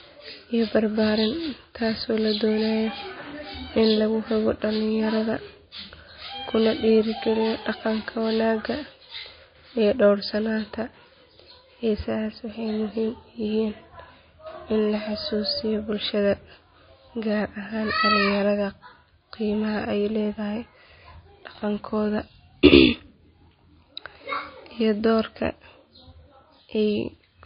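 Throughout the speech, likely MP3 compression at a very low bitrate removes everything above 5.1 kHz and leaves watery, swirly sibilants. A spectrogram shows a flat ceiling there with flickering gaps below.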